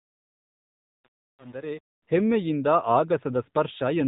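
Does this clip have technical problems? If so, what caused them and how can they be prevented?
Yes. AMR narrowband mobile codec damage runs through the whole clip. Nothing above 3.8 kHz survives, and the speech has a plainly audible buzzy, synthetic edge. The audio passed through an 8 kHz mobile codec that rebuilds each 20 ms frame from a vocal-tract model driven by a few pulses, and the coarseness fits a low mode of around 7.4 kbps. To prevent it, capture or transfer the audio over a wideband or lossless path rather than a narrowband phone link.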